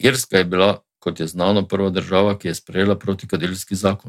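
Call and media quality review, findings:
No audible faults found in the speech recording; nothing to escalate on the capture or transmission path.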